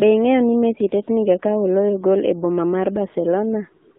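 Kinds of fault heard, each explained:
AMR narrowband mobile codec: The speech passes only about 200 Hz to 3.7 kHz and sounds plainly buzzy and synthetic, which fits a low AMR-NB rate near 7.4 kbps.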